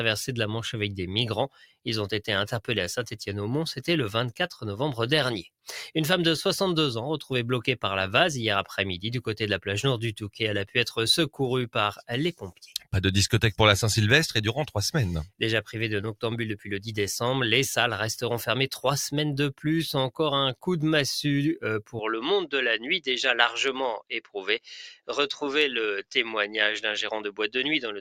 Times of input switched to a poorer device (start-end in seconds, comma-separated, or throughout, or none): 21.99-28.00